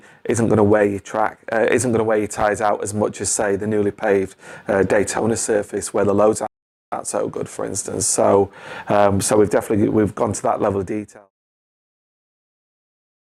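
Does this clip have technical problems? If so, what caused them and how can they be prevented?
Yes. A playback stall cuts the sound to silence from 6.47 to 6.92 s, a gap of about 454 ms. The likely cause is the player's buffer running dry or its audio thread being blocked. Larger playback buffers and keeping blocking work off the audio thread prevent this.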